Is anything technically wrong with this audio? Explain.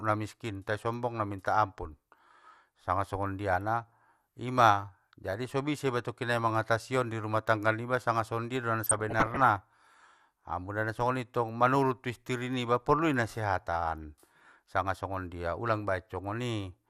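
Yes, there are two faults. MP2 compression runs throughout: the speech is dull and gurgling, likely from MPEG Layer II coding at a rate fitting about 80 kbps, starving the upper sub-bands of bits. DAB burbling appears from 8.84 to 9.44 s: uncorrected bit errors corrupt sub-band samples and scale factors, so bands jump in level, giving bubbling, squelchy chirps.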